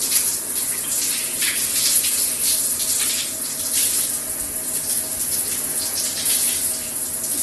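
Throughout the clip, the audio was likely squeezed through Opus compression in its CELT music mode at a very low bitrate, consistent with about 12 kbps. The encoder fills starved bands with folded or noise content, so tones come out grainy and rough, with nothing above 12 kHz.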